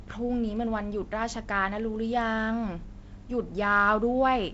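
No technical faults detected.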